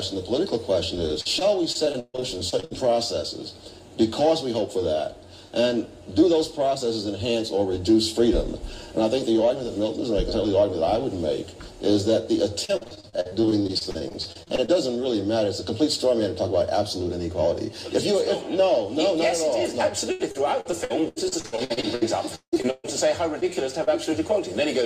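From 1.07 to 2.73 s, repeated packet loss gives a robotic sound. Packets keep arriving late or not at all. Each hole is filled by stretching the last sound forward. About a dozen gaps fall in this stretch, the longest 141 ms. About a quarter of it is patched. The result is choppy, with pieces missing. The same fault returns from 12.65 to 14.70 s, with around two dozen shorter gaps of up to 47 ms. It covers about a third of that span. It comes back again from 20.12 to 22.86 s, with nearly twenty gaps. The longest is 172 ms, and about 35 percent of the span is concealed.

Short concealed packet loss follows twice: 23.40 to 23.43 s and 23.84 to 23.89 s. Each time about 20 ms of audio never reaches the decoder in time. The receiver continues the preceding sound across the hole, then blends back into the real signal. Each one is heard as a brief smear or wobble.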